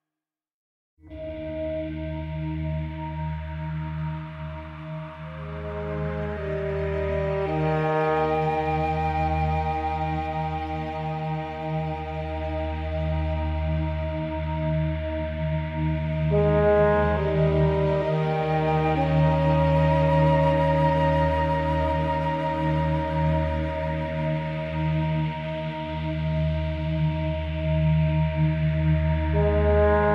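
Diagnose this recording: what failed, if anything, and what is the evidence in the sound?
Nothing failed in this recording, and there is no evidence in the sound of any fault.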